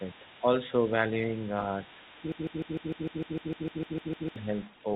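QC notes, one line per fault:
throughout: other side's voice leaking through, a faint second voice sitting about 25 dB under the talker, likely loudspeaker echo the canceller left in the microphone.
0.41–0.45 s and 1.88–1.97 s: speech suppressed in double talk, with brief dips of about 5 dB, likely the canceller attenuating everything while the far end spoke.
2.32–4.36 s: broken-record loop, a 0.15 s fragment repeated 13 times back to back, replacing the real audio, likely a stalled stream resending its last buffer.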